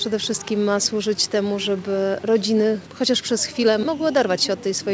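No technical faults can be heard anywhere in the audio. It has passed through a call's microphone processing and a wideband call codec, so the bass is trimmed and nothing is present above 8 kHz, which fits G.722.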